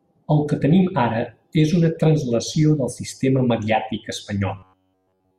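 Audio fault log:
4.56–5.38 s, robotic sound from repeated short buffers: after "translació del sistema mediàtic" the speech becomes a rigid metallic buzz at 93.8 Hz, likely from roughly 10.7 ms buffers repeated throughout. The waveform shows nearly identical repeating cycles, and the spectrogram shows evenly spaced harmonic lines.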